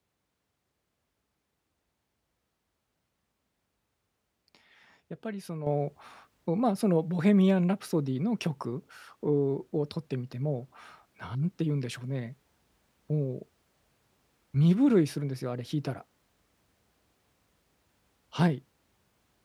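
At 5.67 s there's a sudden gain jump: the level of the speech steps up by about 8 dB in one go, and the background noise comes up right along with it, staying there through to the end of the clip. Because it's an instant step with no fade, the likely cause is a digital gain setting being applied without a ramp, so everything after that point simply sits louder than what came before.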